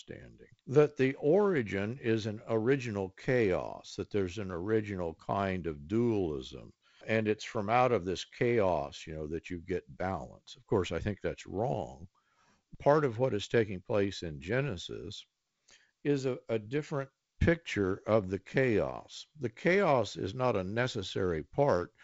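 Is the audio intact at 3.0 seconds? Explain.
Yes, the audio is intact at 3.0 seconds, with no fault at that moment.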